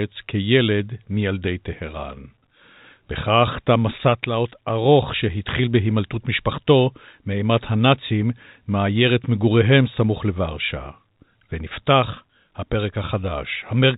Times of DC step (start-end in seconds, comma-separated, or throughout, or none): none